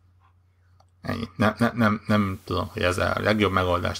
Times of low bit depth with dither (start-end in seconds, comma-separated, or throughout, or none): 2.11-4.00